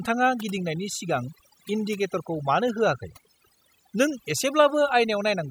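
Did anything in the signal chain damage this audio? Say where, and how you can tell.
Yes. The damage comes from overdone noise removal at the call-processing stage, and it runs through the whole clip. Between phrases the background drops to near silence, dotted with twinkling specks. A noise suppressor set too aggressively is cutting individual frequency bands hard whenever their level sits close to its noise estimate. Quieter parts of the voice fall into that range and get pulled down with the noise.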